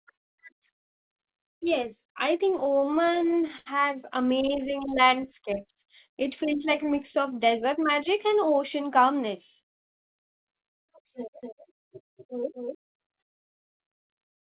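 From 2.5 to 3.68 s, repeated stalls (stutter): packets arrived late, so the jitter buffer ran dry 17 times. Each gap, up to 84 ms, is filled by continuing the last sound, making the speech drag and catch. On a spectrogram these appear as smeared, repeated frames with flattened harmonics.

Between 4.76 and 5.29 s, a jitter buffer slow-down repeats pitch periods to rebuild reserve. It adds 64 ms, so the speech runs at 89% speed with unchanged pitch. Stretched harmonic bands are visible in the spectrogram.

From 7.24 to 8.34 s, a jitter buffer speed-up trims out about 70 ms of pitch periods to cut excess delay. Speech runs at 106% speed and sounds hurried, with slightly compressed syllable spacing in the waveform.

From 11.43 to 12.75 s, there is a doubled audio track. A dry, full-band copy about 5 dB quieter trails by roughly a fifth of a second, likely from a second, slower capture path. 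It starts and stops abruptly, and the spectrogram shows every formant pattern repeated after the delay. Like the rest of the call, the copy has nothing above 4 kHz.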